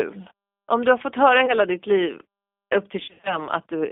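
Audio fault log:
Throughout: G.729 codec. The whole clip carries the sound of a low-rate speech codec, consistent with G.729A at 8 kbit/s: the line band runs only from about 250 Hz to 3.6 kHz, so there is no air above that and little body below. Each 10 ms frame is rebuilt from a vocal tract filter, a pitch predictor and a few pulses, which leaves the speech plainly rough and slightly synthetic. This is a steady coloration, unlike the sudden breaks below.
1.46 to 1.54 s: VoIP packet loss concealed by the speech codec. Right after "du har fått höra" the sound briefly smears into a held, buzzy continuation. That points to about 20 ms of lost audio, two frames' worth. The decoder repeats its last pitch and filter at falling gain. Recovery takes until about 1.54 s because each new frame builds on the damaged state. A dropout would be silent, but this fills the gap with a tonal stretch.
3.04 to 3.39 s: VoIP packet loss concealed by the speech codec. 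After "upp till" a heavier run of the same concealment sets in. About 170 ms of audio went missing, scattered across roughly 220 ms, with the longest unbroken gap about 70 ms. The longer gaps let the extrapolated tone decay into a fading, coloured buzz. Short stretches of real signal return between gaps but stay weak and distorted. This makes it a choppy, wavering passage rather than one clean cut.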